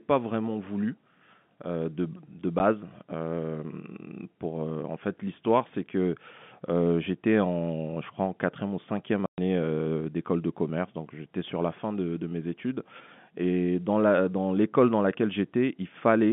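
Speech over a telephone-band G.711 line has packet loss filled with silence: a 10 ms dropout at 2.59 s and a 120 ms hole from 9.26 to 9.38 s, consistent with 10 ms packets. Each shows as a flat silent stretch in the waveform and a blank vertical band on the spectrogram, with hard edges.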